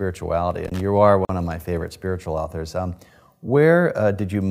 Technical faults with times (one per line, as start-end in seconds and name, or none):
0.65-0.81 loose connector crackle
1.25-1.29 gap at a join of encoded pieces